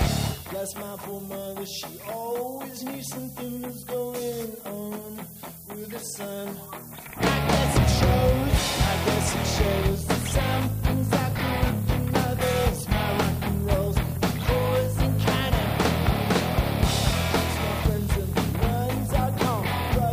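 A thin, steady hiss climbing sharply toward the top of the band runs throughout, roughly 15 dB under the sound: low bit depth with noise shaping, 7 bits.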